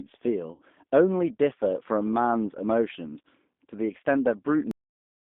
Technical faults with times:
0.00-5.27 G.729 codec
0.54-0.62 VoIP packet loss concealed by the speech codec
4.71-5.27 cut-off end

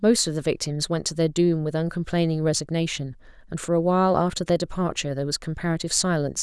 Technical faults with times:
none

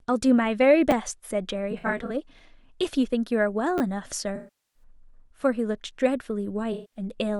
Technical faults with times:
0.91 repeated buffer
1.71-2.11 AAC frame loss with concealment
3.78-3.80 repeated buffer
4.35-4.83 AAC frame loss with concealment
6.72-6.99 AAC frame loss with concealment

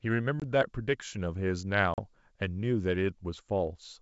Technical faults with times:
0.40-0.45 packet loss on an ADPCM call
1.94-2.01 packet loss on an ADPCM call

